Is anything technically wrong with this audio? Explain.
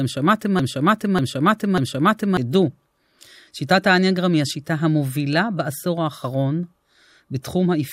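Yes. Already under way at the start and lasting until 2.37 s is a broken-record loop. The same 0.59 s fragment repeats identically, without the decay of an echo, likely because the stream stalled.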